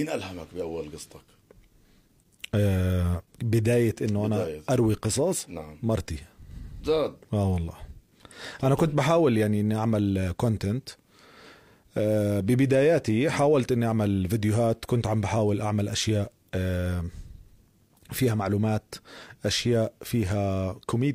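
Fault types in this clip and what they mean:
No technical faults can be heard anywhere in this clip. There is nothing to list for it.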